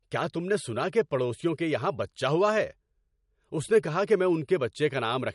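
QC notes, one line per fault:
Throughout: MP3 compression. Nothing is heard above 11.2 kHz, so s sounds lose their edge. The speech sounds plainly watery and swirly as weak frequency lines flicker on and off between frames. The likely cause is an MP3 encoder starved of bits, which fits about 48 kbps.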